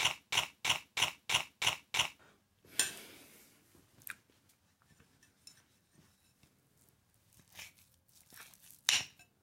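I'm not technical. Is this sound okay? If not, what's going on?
No. From the very start to 2.19 s there is a broken-record loop: the same 0.32 s snippet repeats exactly, back to back, six times, already under way when the clip begins. Unlike a brief stutter, the repeats are identical and sustained, and the sound that should have played there is lost, likely because playback or streaming stalled.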